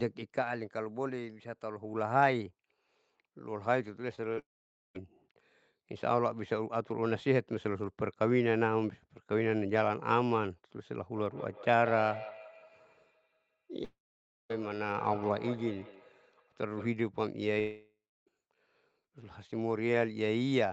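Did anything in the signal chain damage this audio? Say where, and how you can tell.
Yes. At 4.15–4.19 s and 4.33–4.39 s the sound smears and wobbles briefly. This is short concealed packet loss in the network stage: about 20 ms and 40 ms never arrived, and the decoder covered each gap by extending the preceding sound before rejoining the real stream.

At 4.39–4.97 s, 13.85–14.52 s and 17.60–18.29 s, a fading buzz gives way to silence for up to about half a second, and the audio returns with a piece missing. This is a long network dropout, likely from packets lost for 560–680 ms, with concealment running out after a short stretch.

From 11.16 s to 16.98 s, each sound returns roughly every 150 ms, thinner and more ringing, and reaches about −14 dB relative to the speech. This is feedback echo between two devices: a second device in the room replays the call, and the first microphone picks it up again. 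Neither echo canceller removes the other device's output.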